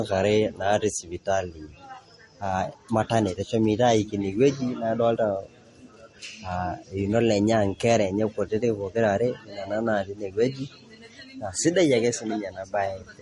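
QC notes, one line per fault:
throughout: transcoding between lossy codecs, likely Vorbis re-encoded as MP3 at rates fitting about 46 and 48 kbit/s; both sets of artefacts sound together, nothing above 11.1 kHz.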